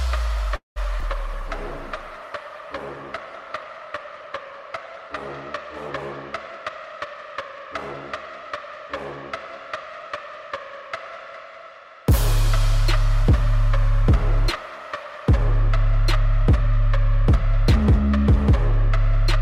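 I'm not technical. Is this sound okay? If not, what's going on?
No. Four kinds of fault can be heard.

Call audio freeze, 0.55 to 0.78 s: the likely cause is that pieces of the call were held up on the network, so the receiving end ran out of sound to play. It stretched out the last bit of sound, which faded to near silence for about 0.15 s. When the delayed audio arrived, playback carried on where it had stopped. Nothing was lost, but a gap of about 0.2 s was added.

Short concealed packet loss, twice in a row, 1.00 to 1.03 s and 1.03 to 1.05 s: each time, a brief slice of audio never arrived in time, and the receiver didn't have it to play. It patched each hole by guessing from the sound just before it, then blended back into the real audio. You hear a quick smear or wobble rather than a clean gap.

Call bitrate drop, 1.09 to 5.36 s: the connection appeared to slow down, so the sending side was told to squeeze the audio into far less data. 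For a little over four seconds it was coded much more roughly, and the top of the sound was cut off, from about 20 kHz down to about 12 kHz. The audio sounds duller and somewhat rough or watery until quality recovers.

Jitter buffer speed-up, 6.51 to 8.03 s: the receiver had built up more stored audio than it wanted, which added delay. To catch up, it cut out many tiny slices in quick succession, about 0.2 s in total. The pitch stays the same, but this stretch plays about 13% faster and can sound hurried.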